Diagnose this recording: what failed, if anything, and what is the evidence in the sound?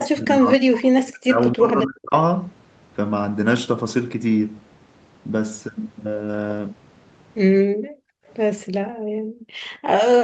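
Right at the start, 0.0 to 0.09 s, there's a short echo leak: a delayed copy of the talk trailing by 265 ms, only about 10 dB under the direct speech. A much fainter one, about 35 dB down, turns up at 8.27 to 8.33 s with the same 265 ms delay. That's call processing on the far end. Most likely its echo canceller let loudspeaker pickup through and sent it back.

Over the first couple of seconds the talker keeps dipping. From 0.0 to 1.39 s the level falls as far as roughly 40 dB, with around a second of it affected. From 1.55 to 2.14 s it drops again, roughly 30 dB deep over about half a second. This is speech suppressed in double talk, likely caused by the echo canceller. With both sides talking it couldn't separate local speech from echo, so it turned everything down.

Later the room tone pumps out. From 7.66 to 8.27 s and again from 8.71 to 9.61 s the background drops by about 40 dB, each time for roughly 0.7 s in total, then comes back. 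That's background gated by the echo canceller. It hit the microphone path hard while the loudspeaker was active and released once the canceller let go. The Opus call path's band limit at 8 kHz is present too, but that's normal behaviour and not part of the fault.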